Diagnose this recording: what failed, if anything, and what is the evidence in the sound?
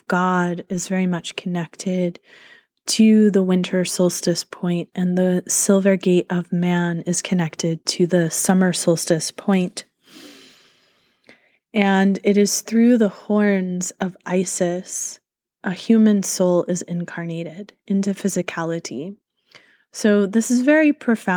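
Nothing in the chain has failed: the speech signal stays continuous and stable throughout, with no breaks, level jumps or added artefacts that would point to a fault at any stage.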